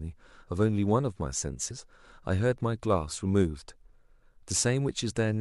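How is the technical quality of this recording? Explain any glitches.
There's one glitch in this speech recording: a short burst of damaged data in the compressed stream, running from about 1.70 to 1.72 s. Somewhere in the encoded file a stretch of bytes got lost or corrupted, so the decoder couldn't make sense of the frames there. It drops sync, hunts for the next valid frame header, and picks up again from there. What you hear is a quick blip, about 20 ms long, cutting into the audio.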